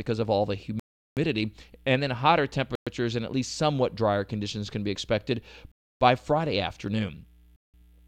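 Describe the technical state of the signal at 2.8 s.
At 2.8 s the speech drops into a Bluetooth stall. From 2.75 to 2.87 s the signal goes to silence for about 113 ms, then the speech resumes. The likely cause is radio interference delaying packets until the headphones' buffer emptied and playback halted while the resends arrived. The gap is true silence lasting a tenth of a second, not the brief smeared or buzzy fill of packet-loss concealment, nor a click-length underrun.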